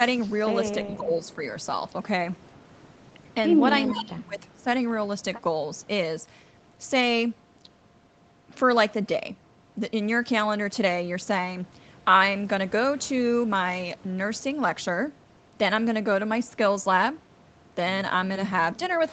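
Around 0.96 to 1.11 s the speech briefly dips by roughly 10 dB, likely speech suppressed in double talk, with the echo canceller ducking this talker while the far side spoke. From 1.25 to 1.35 s a faint delayed copy of the voice slips through, about 30 dB down and trailing by 401 ms, likely an echo leak from a loudspeaker the canceller didn't fully clean up. The same leak comes back much louder from 3.87 to 4.03 s, only about 10 dB under the speech. Overlapping it, from 3.91 to 4.66 s, the speech gets pushed down hard, as much as about 25 dB for most of a second, again likely double-talk suppression. Right at the end, 18.95 to 19.03 s, there's one more quiet scrap of that 401 ms echo, about 30 dB down.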